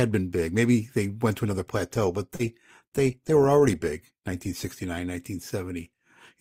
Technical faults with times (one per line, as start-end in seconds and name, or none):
2.35-2.41 short concealed packet loss